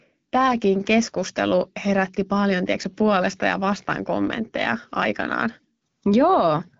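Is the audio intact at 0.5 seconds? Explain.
Yes, at 0.5 s the speech is intact, with no fault at that moment, only the band limit of about 7.6 kHz that comes with the AMR wideband (HD Voice) codec working normally.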